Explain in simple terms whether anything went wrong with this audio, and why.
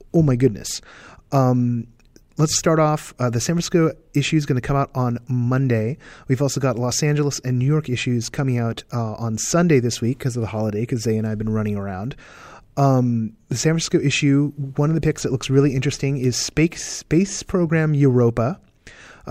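Nothing went wrong with the technical side of this recording; the speech signal is steady and intact throughout.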